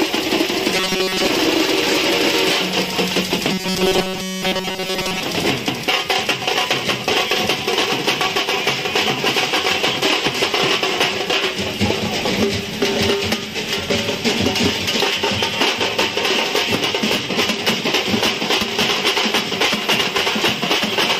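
A rigid, metallic buzz pitched at about 188 Hz is heard from 0.75 to 1.27 s and again from 3.52 to 5.23 s, following the original contour only loosely. This is robotic sound from repeated short buffers, likely caused by audio arriving too seldom, so the playback loops a fragment of roughly 5.3 ms, which fits the 188 Hz buzz, in place of most of the real audio.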